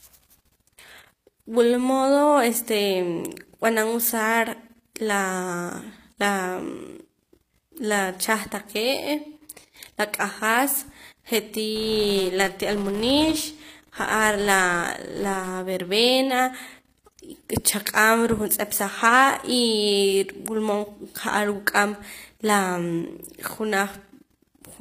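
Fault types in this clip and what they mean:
HE-AAC compression: the speech has plainly audible codec damage throughout, with nothing above 15.5 kHz. This is likely HE-AAC at a low bitrate, coding only the lower spectrum and synthesising the treble by copying lower bands upward, so s sounds come out gritty or lispy.
Filter restarted on every block: from 11.76 to 15.62 s a filter loses its memory between blocks and starts each from silence. Each block opens with a small transient, giving a 188 Hz buzz that tracks the speech level and fits a 256-sample block.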